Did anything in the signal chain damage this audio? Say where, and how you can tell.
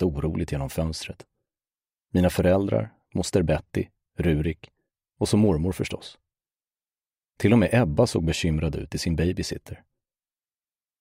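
Yes. The damage sits at the driver or USB transfer stage: these are periodic USB or driver dropouts. Clean ticks land at about 2.0, 4.0 and 6.0 s, exactly 2.0 s apart, each a gap of about a millisecond filled with silence. Something blocked the bus or driver on a fixed schedule, so short runs of samples never arrived. A waveform shows brief flat notches, and a spectrogram shows thin vertical broadband lines at those times.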